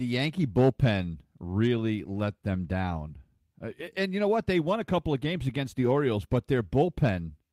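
No technical faults can be heard anywhere in this speech recording. Nothing in the audio breaks, drops out or shifts at any point.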